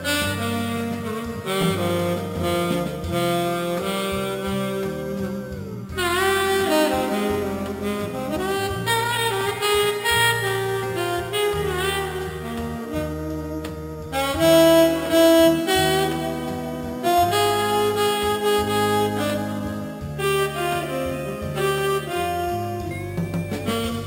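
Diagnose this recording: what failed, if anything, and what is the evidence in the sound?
Imaging from sample-and-hold upsampling at the rate-conversion stage: 12 kHz audio was raised to 48 kHz by repeating samples, leaving mirrored copies at 6–12 kHz, about 16 dB down. Unlike aliasing, the fizz mirrors the original spectrum around 12 kHz.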